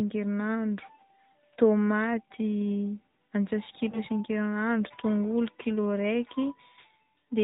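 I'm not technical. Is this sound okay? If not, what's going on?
No. The whole recording has passed through the AMR narrowband mobile codec, the speech compression used on older 2G and 3G phone calls. It keeps only the lower part of the sound, nothing above 4 kHz, so everything is muffled and lacks crispness. It also rebuilds the voice from a simplified model, which is why it sounds plainly buzzy and synthetic. Plain low-quality recording would be dull or noisy, not artificial like this.

At about 3.90 to 3.99 s there are lost AMR speech frames: a short burst of the call's data was damaged in transmission. The phone filled the gap by repeating the previous sound while fading it, which causes a brief dip or warble. Its shortness fits a single lost 20 ms frame. A true dropout or edit would cut straight to silence instead of smearing the sound like this.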